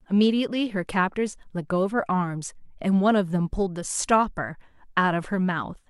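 No technical faults are audible.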